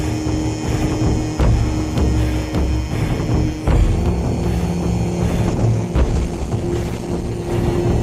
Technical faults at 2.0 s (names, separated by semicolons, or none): none